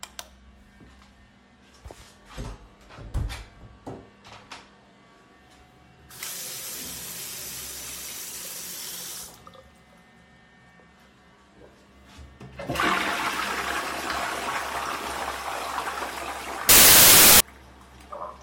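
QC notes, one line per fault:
16.69–17.40 s, samples built from the wrong bytes: near the end the audio turns into loud, harsh broadband noise for about 0.7 s. Each sample's bytes are combined in the wrong order or offset, so the jittery low bits become the dominant value. The spectrogram shows a solid broadband block, and the waveform is a dense slab.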